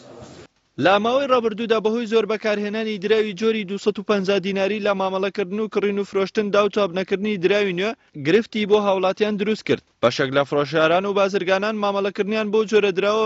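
No technical faults can be heard anywhere in the audio.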